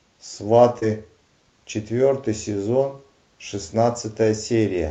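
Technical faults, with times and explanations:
0.79 to 0.83 s, short concealed packet loss: about 20 ms of the speech never reached the decoder in time, and the receiver covered the gap by extending the preceding sound, pitch-continued if voiced or as shaped noise if not, before crossfading back into real audio. That synthetic patch is heard as a brief smear or wobble. The call path's band limit is near 8 kHz throughout.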